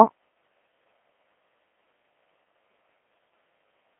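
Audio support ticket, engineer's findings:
Codec 2 vocoder, whole clip, 0 to end. Speech robotic and buzzy, heavy codec damage. Decoder rebuilds the voice from sine waves driven by pitch, voicing, energy and spectral envelope only; original waveform discarded, hence synthetic timbre. Band limited to a 300 Hz to 3.4 kHz line band, nothing above 3.8 kHz. Artefact level fits a low-rate mode around 2.4 kbit/s. Probable component: digital-radio voice link or gateway transcoding to Codec 2.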